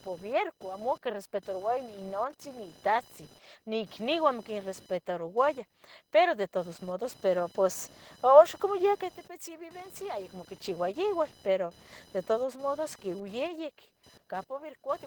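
A speech recording with two problems running the whole way through. First, there's computer activity noise: a buzzy, chirping whine pulsing at around 1 kHz, sitting roughly 30 dB under the voice. It's processor or peripheral load currents leaking into the audio ground, so it follows the machine's activity, not the talking. Second, Opus voice compression damage is plainly audible. The voice sounds a bit hoarse and robotic. That fits a hybrid setup around 16 kbps, with SILK handling the bottom 8 kHz and a thin CELT layer stretched over the rest up to about 20.1 kHz.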